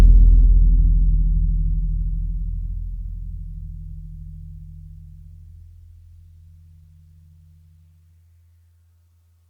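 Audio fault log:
Nothing faulty heard anywhere in this music.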